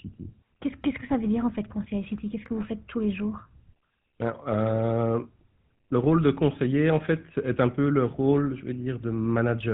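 GSM full-rate codec damage runs through the whole speech clip: the voice has been reduced to a vocal-tract model driven by regularly spaced pulses, which gives the plainly audible buzzy, gravelly roughness and a hard cutoff above 4 kHz, consistent with a 13 kbps GSM link.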